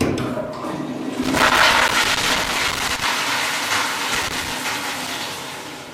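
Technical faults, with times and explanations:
1.23–3.04 s and 4.15–4.51 s, loose connector crackle: irregular bursts of scratchy crackle, the long one near two seconds and a shorter one later. A worn or dirty contact keeps making and breaking, chopping the signal, and any DC on the line turns those breaks into little pops.
1.88 s, block of digital silence: about 10 ms of the output drops out to silence, right in the middle of the first crackle. It cuts out and back with no fade, so you hear a tick, likely from the output buffer not being filled in time.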